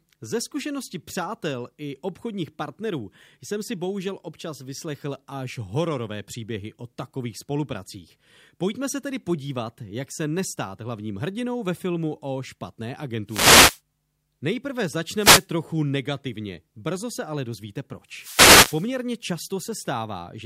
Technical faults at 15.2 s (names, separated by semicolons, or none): wireless microphone noise hit